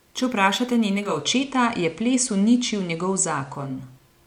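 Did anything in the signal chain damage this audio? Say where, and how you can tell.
Yes. From 0.95 to 3.82 s the speech picks up faint hiss and shifts level by about 2 dB, each edge fading over 353 ms. That is digital radio blending to analogue at reception: the receiver fell back to FM, then returned.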